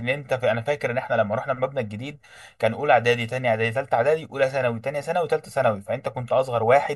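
Throughout the speech, channel delay causes comb filtering: one channel arrives roughly 1.5 ms late, and summing to mono cancels frequencies near 300 Hz and at even steps above. The sound is hollow and phasey, and a spectrogram shows fixed, evenly spaced dark horizontal bands.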